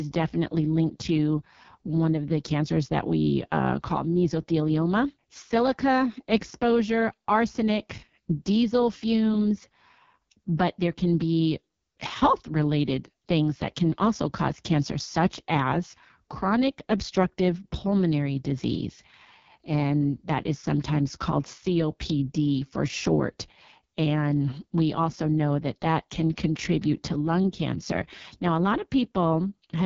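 It's a speech clip, and the whole thing has been squeezed through the AMR wideband (HD Voice) codec, running hard. The voice comes out rough and raspy, with a grainy, buzzy edge that never lets up, which fits the codec's bottom 6.6 kbit/s mode, where the vocal tract model just doesn't get enough bits. There's also nothing above about 7.3 kHz, so the top end sounds flat and papery rather than airy.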